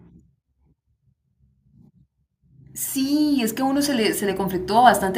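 A speech recording with automatic gain rising from 2.94 s to 5.08 s: the gain control judges the input too quiet and lifts its gain by about 9 dB over those two seconds, so the voice and the background noise swell together.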